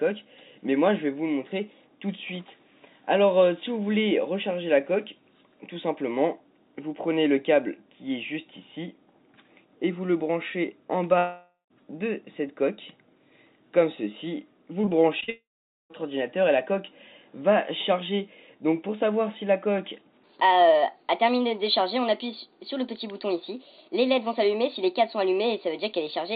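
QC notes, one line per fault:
11.18–11.72 s, long network dropout: about 0.52 s of audio never arrives. The receiver stretches the last sound into a fading buzz, and the final 0.15 s or so is silence. The audio then resumes with that stretch missing. A network outage is the likely cause.
14.82–15.30 s, repeated packet loss (robotic sound): five short holes, the longest 42 ms, each patched by repeating the preceding sound. About a fifth of this half-second is concealment, so the audio turns choppy, with fragments missing.
15.30–15.92 s, long network dropout: immediately after the choppy patch, about 0.6 s is lost. The concealment fill decays quickly, leaving roughly 0.47 s of silence before the audio picks up again further on, likely from a second network outage.
20.24 s to end, section at the wrong speed: playback runs 1.22 times too fast, so everything is hurried and sits about three semitones higher, speed and pitch shifting together. 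A clock mismatch in playback or editing is the likely cause. The 4 kHz band limit of the G.711 call path is audible throughout.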